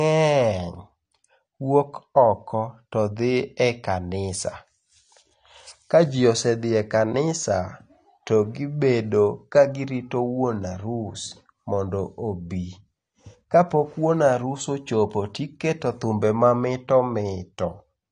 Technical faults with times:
0.00-18.11 AAC compression

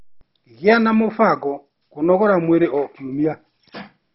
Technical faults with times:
0.00-4.14 MP2 compression

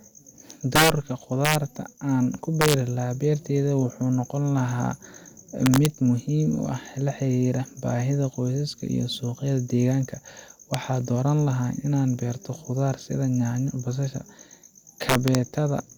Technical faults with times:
0.76-0.90 integer overflow
1.45-1.55 integer overflow
2.61-2.74 integer overflow
5.66-5.86 integer overflow
10.74 integer overflow
15.09-15.35 integer overflow

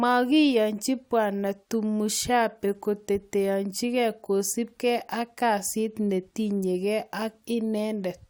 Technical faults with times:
none

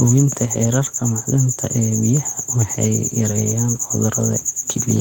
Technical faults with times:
none

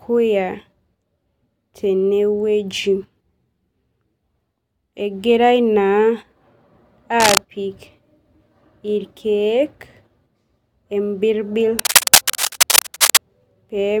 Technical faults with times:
7.20-7.38 cable scratch noise
11.79-13.17 cable scratch noise

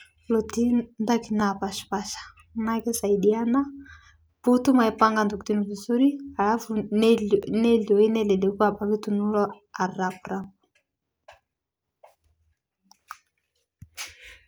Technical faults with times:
1.40 overlapping chunks
4.41 overlapping chunks
7.43 overlapping chunks
10.44 overlapping chunks
13.45 overlapping chunks

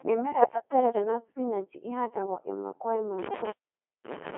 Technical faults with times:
0.00-4.37 Codec 2 vocoder
0.41-0.53 bit errors on digital voice radio

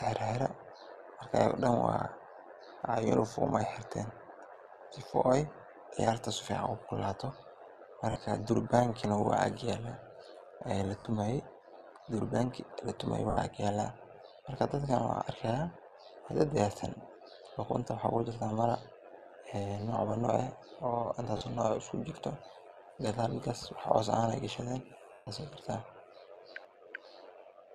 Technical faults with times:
0.00-27.74 overlap-add ripple
8.12-8.16 lost LE Audio frames
10.99-11.05 lost LE Audio frames
13.30-13.37 lost LE Audio frames
21.37-21.41 lost LE Audio frames
25.13-25.27 lost LE Audio frames

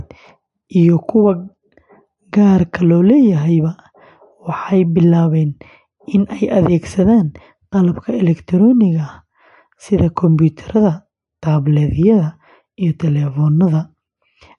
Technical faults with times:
0.00-14.58 MP3 compression

